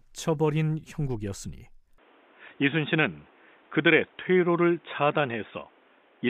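Input switched to a poorer device at 1.98 s: the speech abruptly turns dull and boxy, losing everything above 3.8 kHz, with faint new background noise, likely from a narrower-band microphone.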